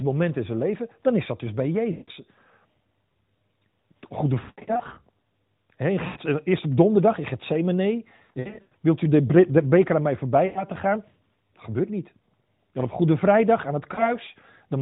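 Lost AMR speech frames at 1.92, 4.40–4.99, 6.08, 8.16–8.73, 10.46 and 13.94 s: failed frames make the decoder stretch the last good sound with fading gain, so speech warbles, smears and briefly dips toward silence.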